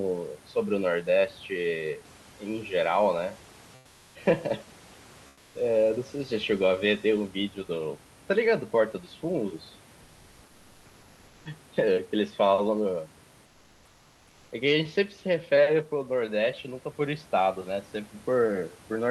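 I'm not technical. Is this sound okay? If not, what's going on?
No. In three quiet gaps, from 3.79 to 4.15 s, 5.29 to 5.53 s, and 13.45 to 14.47 s, the room's natural background is replaced by comfort noise. It's a smooth, even hiss, slightly quieter and flatter than the real room sound around it. The call system likely stopped sending audio during the pauses and filled them with made-up noise. Unlike a dropout, the sound never goes fully silent; the hiss just turns uniform.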